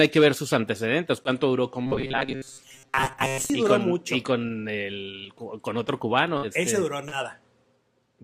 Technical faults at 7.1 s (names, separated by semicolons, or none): short concealed packet loss